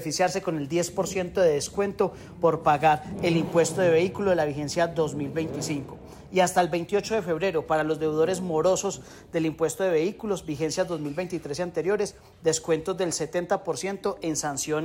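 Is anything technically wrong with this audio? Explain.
No, nothing technically wrong can be heard anywhere in this audio.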